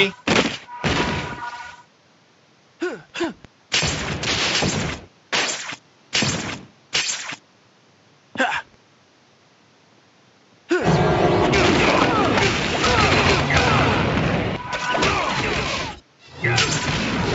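No technical fault can be heard anywhere in the audio; the signal holds steady from its opening moment to its close.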